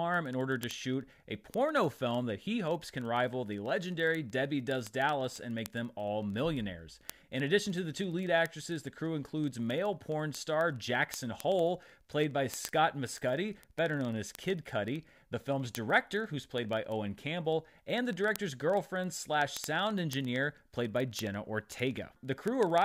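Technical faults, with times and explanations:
0.1 to 22.8 s, word clock ticks: a rapid, steady stream of sharp ticks runs under the speech, one roughly every 40 ms, so hundreds across the clip, some clearly louder than others. The receiving device is running on its own clock rather than locking to the sender's, and the two differ by several hundred parts per million. Each time they slip past each other, a single sample is dropped or repeated, leaving a tiny step in the waveform.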